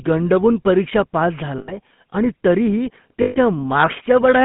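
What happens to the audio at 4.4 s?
At 4.4 s the speech still carries GSM full-rate codec damage, present throughout the clip. A vocal-tract filter driven by sparse, regularly spaced pulses gives a plainly audible buzzy, gravelly roughness, consistent with a 13 kbps coder, and the band is confined to about 150 Hz to 3.6 kHz.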